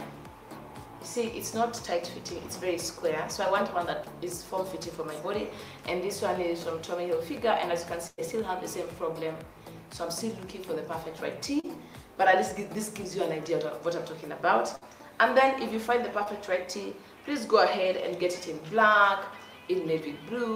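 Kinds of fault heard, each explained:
burst of packet loss: Twice here a run of packets got lost or showed up too late, so the receiver kept the last bit of sound going and let it fade until real audio came back further along. At 8.07 to 8.20 s it papers over about 100 ms with roughly 103 ms of fill, including about 20 ms of silence. At 14.75 to 14.83 s it covers 60 ms with 59 ms of fill. The result is a held buzz or fading hiss, then a jump.
short concealed packet loss: Two smaller drops are covered more smoothly, where a few hundredths of a second never made it to the decoder in time. The receiver extended the preceding sound, following its pitch or using shaped noise, and then blended back into the real signal. At 11.60 to 11.65 s about 40 ms goes missing under 37 ms of fill, and at 16.23 to 16.28 s about 20 ms under 24 ms. Each one comes across as a quick smear or wobble.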